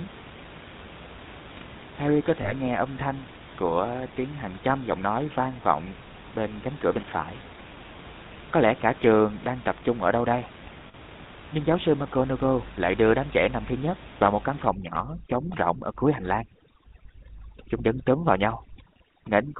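GSM full-rate codec damage runs through this whole speech recording: the coder rebuilds the voice from a vocal-tract model and a sparse pulse excitation and drops everything above 4 kHz, leaving a dull, buzzy, gravelly roughness that fits the 13 kbps full-rate coder. Lost GSM frames occur at 2.42–2.53 s and 10.88–10.95 s, where the decoder held the last good frame's settings, giving a brief metallic ring that fits one missing 20 ms frame and then three in a row. Overdone noise removal sets in from 14.68 s to the end. The room noise, about 18 dB below the speech, is pushed down and broken up into twinkling specks, and the quieter parts of the voice are cut along with the noise.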